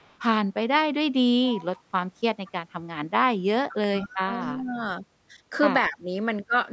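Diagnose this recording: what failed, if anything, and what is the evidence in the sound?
Echo leak in the call processing: a faint delayed copy of the speech trails it at 0.00–0.19 s, 1.44–1.82 s and 2.45–2.52 s, always offset by 224 ms. It is weakest at the start, about 35 dB down, and strongest at 1.44–1.82 s, about 20 dB down. The fixed delay points to a loudspeaker-to-microphone path on the far end, likely with an echo canceller that failed to fully subtract its own playback before sending it back.

Speech suppressed in double talk, again in the call processing stage: the speech level collapses between 3.68 and 4.77 s, dipping as much as about 25 dB for roughly a second in total, and again at 5.89–6.10 s, by about 20 dB for around 200 ms. The likely mechanism is an echo canceller that heard both sides at once, could not separate local speech from echo, and attenuated everything, with the audio band stopping at 8 kHz throughout.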